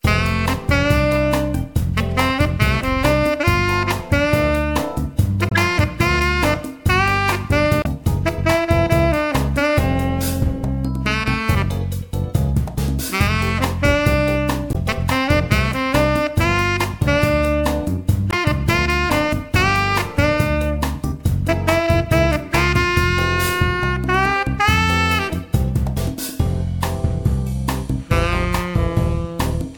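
At 5.48 to 5.52 s, 7.81 to 7.87 s, 14.72 to 14.76 s and 18.30 to 18.34 s there's a short burst of damaged data in a compressed stream, each about 40 to 55 ms long. Some bytes in the encoded stream got mangled, so the decoder misreads those frames, loses its place and has to hunt for the next valid frame header. You hear each one as a chirp, squawk, click or short hole cutting through the sound.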